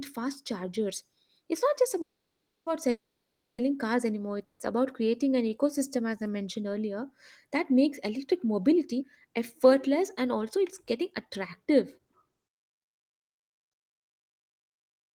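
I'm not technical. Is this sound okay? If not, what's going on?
No, it has some problems. The speech keeps stopping briefly, then slows down and speeds up in places.

There are three call audio freezes: 2.01 to 2.68 s, 2.90 to 3.60 s (just before "cars anymore"), and 4.44 to 4.61 s (right after "cars anymore"). The sound goes nearly silent, then picks up where it stopped. Nothing is lost. Delayed network data is the likely cause.

A jitter buffer slow-down happens from 5.24 to 5.90 s, just before "as I mentioned earlier." The speech drags about 8% slower, at the same pitch. The receiving end is stretching sound to rebuild its reserve.

There are two jitter buffer speed-ups. From 8.78 to 9.66 s the speech runs about 5% faster, and from 10.56 to 12.60 s about 6% faster. The pitch stays the same, but it sounds hurried. Tiny slices are being cut out to reduce the delay.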